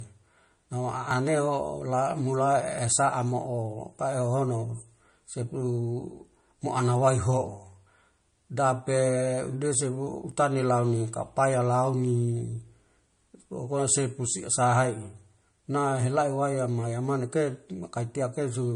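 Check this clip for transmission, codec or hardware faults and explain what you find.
Two faults are present in the speech.

Throughout, the likely cause is low-bitrate audio saved at a high bitrate. Swirly MP3 artefacts persist despite the large file.

At 1.11, 2.78 and 10.32 s, skips of about 10, 30 and 10 ms point to a dropped buffer (overrun). The sound jumps ahead with no silent gap, unlike a dropout.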